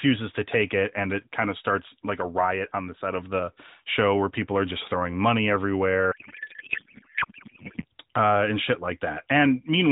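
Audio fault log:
6.12–7.85 s, codec payload misread: for about 1.7 s the speech gives way to garbled noise and warble that barely tracks it, ending just before "uh and shit". The AMR narrowband stream on either side carries its usual light 4 kHz band-limiting. The decoder is unpacking real frames with the bits assigned to the wrong fields, which points to octet-aligned AMR frames being read as bandwidth-efficient. Every parameter comes out scrambled, so the synthesis yields warble instead of speech.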